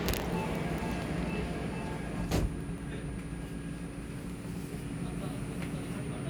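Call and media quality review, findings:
No findings in this call and media quality review: the audio shows no faults.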